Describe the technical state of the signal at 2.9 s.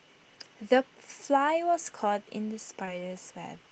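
Short concealed packet loss occurs from 2.85 to 2.89 s: about 20 ms of audio never arrived and the receiver patched the gap by extending the preceding sound, then cross-fading back. Unlike a plain dropout, it leaves no silence, only a brief smear or wobble.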